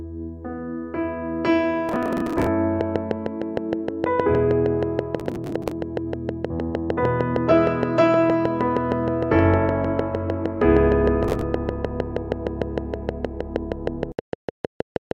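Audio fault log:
1.89–2.47 s, 5.20–5.72 s and 11.25–11.42 s: processor overload crackle. Gritty tearing rides on the sound in three bursts. Short chunks of audio simply go missing, leaving tiny hard-edged skips. Their spacing fits buffers of roughly 10 ms. Dozens are lost in the longer bursts.
2.81–15.12 s: train of clicks. Regular ticking runs at 6.44 clicks per second until the end, about seventy in all. The clicks have the same shape and peak roughly 15 dB above the sound. The likely cause is interference from nearby equipment or a faulty connection or power supply.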